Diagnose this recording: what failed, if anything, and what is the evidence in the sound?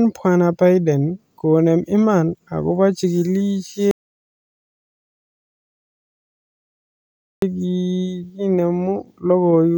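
The failure here is an audio dropout to silence. At 3.91 s the speech cuts off mid-flow and the track goes to silence, with no room tone or noise floor at all, until the speech picks up again at 7.42 s. That's about 3.5 s of speech simply missing. The stage is upstream of the recorder, most likely a disconnected input or failed link, or a stray mute, while the recorder kept writing silence.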